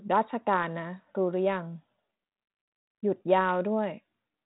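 No faults are audible in this speech, which carries the light coding grain of 32 kbit/s G.726 ADPCM and nothing above about 3.9 kHz.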